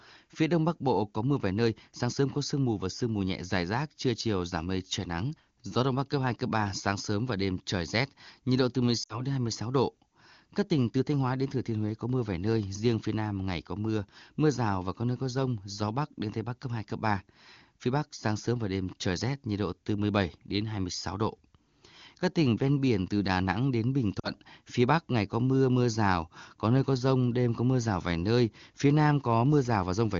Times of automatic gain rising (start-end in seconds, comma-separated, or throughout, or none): none